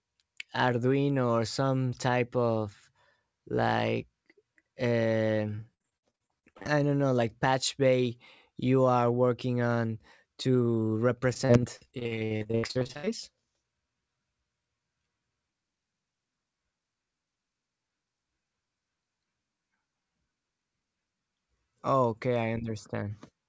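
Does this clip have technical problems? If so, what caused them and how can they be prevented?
Yes. The speech has repeated packet loss, heard as robotic sound, from 5.56 to 6.67 s and again from 11.33 to 13.09 s. Packets kept going missing or arriving late. Each hole was patched by stretching the last bit of sound. The next hole followed almost at once. That makes the choppy texture. About a dozen gaps fall in the first stretch, and roughly 27 in the second. The longest are 59 ms and 78 ms. Concealment covers about 35% and 44% of those spans. The call path's wideband codec limits the sound to nothing above 8 kHz. A steadier network connection, or a deeper jitter buffer with forward error correction, would prevent these dropouts.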